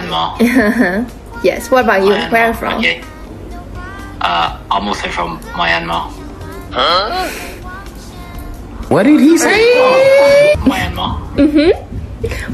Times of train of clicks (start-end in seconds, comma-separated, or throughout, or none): none